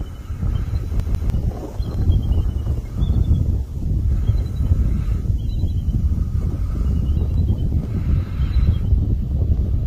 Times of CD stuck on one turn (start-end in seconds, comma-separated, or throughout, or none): 1.00-1.30